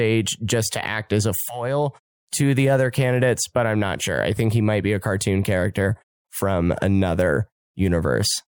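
This speech clip has nothing technically wrong with it.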